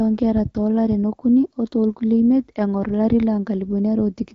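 No technical faults can be heard anywhere in the speech. It carries the slightly band-limited character of HD Voice coding, with the light codec colouring that fits AMR-WB at around 12.65 kbit/s.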